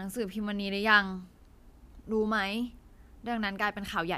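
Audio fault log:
No faults can be heard anywhere in this speech.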